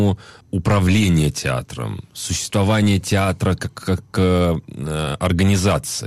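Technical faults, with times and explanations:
No technical faults are audible anywhere in this speech recording.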